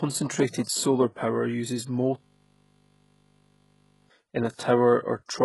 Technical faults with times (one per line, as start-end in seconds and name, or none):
0.00-5.44 HE-AAC compression
2.18-4.10 system hang loop